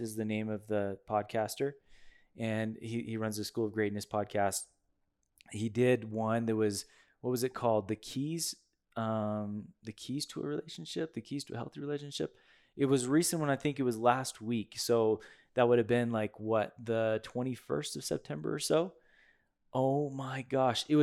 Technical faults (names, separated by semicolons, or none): none